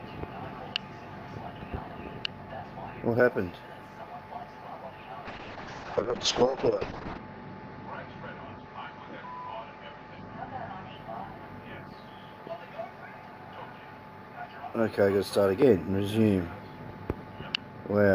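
From 5.27 s to 11.01 s the sound turns rough and watery, and the top end disappears: the audio band narrows from 20 kHz to about 8 kHz, leaving it muffled, at its worst for roughly 1.9 s before clarity returns. This is a call bitrate drop. The call's bandwidth estimate fell and the encoder was forced to code far more coarsely, which points to a fall from around 64 kbps to about 6 kbps, shedding high frequencies to save bits.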